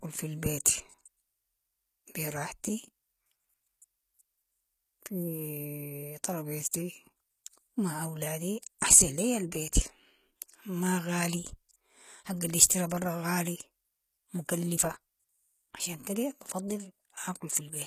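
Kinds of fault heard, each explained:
HE-AAC compression: s sounds come out gritty and lispy, with treble ending near 14.9 kHz; likely low-bitrate coding, around 20 kbps, rebuilding highs by band replication.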